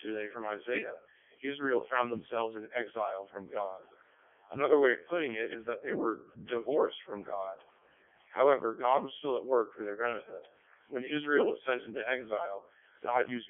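From start to finish the speech carries the sound of the Codec 2 vocoder, heavily damaged, at a density that fits its lowest 0.7 kbit/s mode. Only pitch, voicing, energy and a coarse spectral envelope survive; the decoder rebuilds the voice from sine waves, so the original waveform is gone. The result is robotic and buzzy, confined to roughly 250 Hz to 3.5 kHz, with nothing above 3.5 kHz.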